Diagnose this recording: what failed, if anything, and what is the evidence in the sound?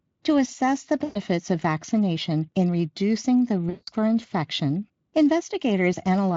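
The network stage failed: VoIP packet loss concealed by the speech codec, twice. After "assess the", from 1.03 to 1.2 s, about 120 ms of packets went missing, and after "vaccination in reducing the", from 3.69 to 3.89 s, about 180 ms. The Speex decoder stretched its last pitch and filter state with falling gain, so each gap turns into a buzzy tone or coloured noise that fades. Because each frame builds on the previous one, the audio stays weak and smeared briefly after packets resume.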